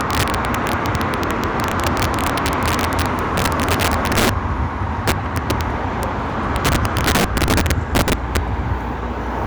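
An everyday sound recording, and it's hit by integer overflow all the way through: with the level pushed about 12 dB too hot, roughly 3% of the samples wrap around to the opposite extreme instead of being limited, so loud moments crack violently, far harsher than clipping.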